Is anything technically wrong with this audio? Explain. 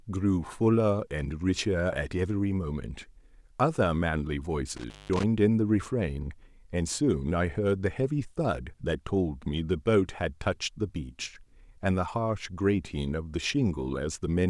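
Yes, there is one fault. An intermittent contact disturbs this speech from 4.76 to 5.23 s. A loose plug or cable connection briefly separates, so the signal path breaks and remakes itself. The clean audio drops out for about 195 ms in that window, leaving only faint hiss, and the moments where the contact breaks and reconnects produce crackles at each edge of the gap.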